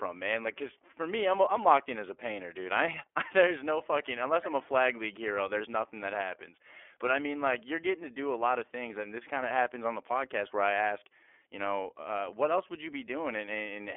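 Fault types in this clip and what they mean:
iLBC codec: throughout, the speech is confined to a telephone band of about 300 Hz to 3.4 kHz, with nothing above 3.7 kHz. It has a plainly rough, synthetic edge from each 30 ms frame being coded independently, which fits iLBC's 13.33 kbps mode.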